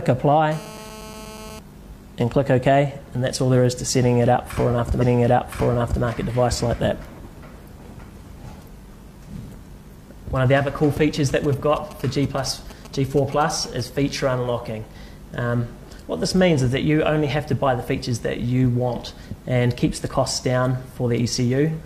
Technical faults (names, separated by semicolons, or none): GSM phone buzz; stream segment repeated; bit error spike; GSM signalling bursts